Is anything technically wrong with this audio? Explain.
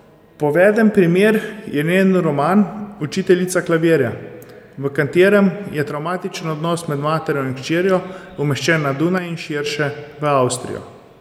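Yes. From 5.90 to 6.34 s and from 9.18 to 9.66 s, the speech abruptly drops by about 6 dB, likely because one channel drops out before the two are summed to mono.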